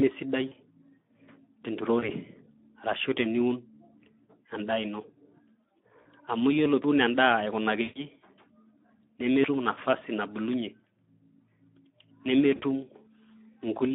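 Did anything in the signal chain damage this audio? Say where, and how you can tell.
Yes. At the codec stage, the whole clip carries Speex codec damage: a hoarse, noisy graininess throughout, with the band confined to 200 Hz to 3.6 kHz. The steady roughness, present with no dropouts, points to a CELP coder starved of excitation bits, consistent with roughly 11 kbps.

At the network stage, VoIP packet loss concealed by the speech codec appears at 0.47–0.53, 1.99–2.14, 6.01–6.07, 7.81–8.10 and 12.55–12.62 s. In each, the sound smears into a fading buzzy tone or coloured noise rather than clicking, as the decoder extrapolates over 20 to 140 ms of missing frames.

At the driver or buffer stage, abrupt forward jumps at 6.84 s, losing around a tenth of a second, and at 9.44 s, just before "nafasi nabulunyie", losing a few tens of milliseconds, were likely caused by a dropped buffer (overrun). 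Unlike concealment, there is no fading tone, just a hard splice.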